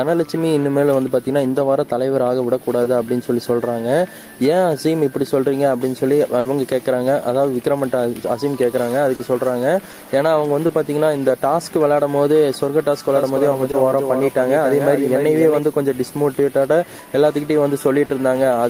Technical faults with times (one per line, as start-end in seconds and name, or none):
2.83-2.87 short concealed packet loss
6.39-6.47 burst of packet loss
9.15-9.21 short concealed packet loss
9.91-9.95 short concealed packet loss
10.67-10.71 short concealed packet loss
13.09-15.59 doubled audio track
13.71-13.75 short concealed packet loss
18.05-18.11 short concealed packet loss